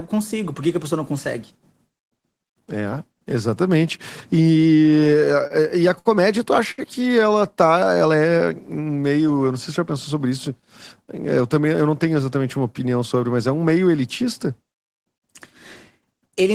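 Late packets left the jitter buffer empty three times, causing a short stall from a late packet each time: at 5.47 to 5.53 s (28 ms), 5.99 to 6.08 s (64 ms) and 6.71 to 6.81 s (67 ms). Each time the receiver held the last sound until the packet arrived. The speech then resumes with nothing lost, but each sound is held too long, with a faint buzz or dip.

From 7.39 to 7.99 s the buffer was refilling. This jitter buffer slow-down repeated pitch periods to add 61 ms, so the speech runs at 91% speed without a pitch change. Sounds are drawn out.

From 9.97 to 10.51 s the buffer held too much. The jitter buffer speed-up trimmed roughly 40 ms of pitch periods, so the speech runs at 106% speed at the same pitch and sounds hurried.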